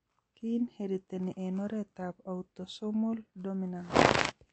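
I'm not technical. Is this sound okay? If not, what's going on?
No, the speech sounds watery and dull from start to finish, with nothing above about 8.3 kHz, which points to likely MP3 compression squeezed too hard.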